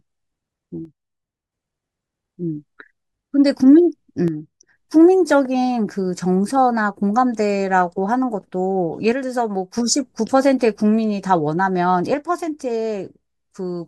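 At 0.85–1.52 s, 4.28–4.77 s, 9.12–9.78 s and from 12.14 s to the end, the speech abruptly falls about 6 dB. The waveform envelope steps down, and the spectrogram dims evenly across all frequencies. The likely cause is that one channel drops out before the mono sum.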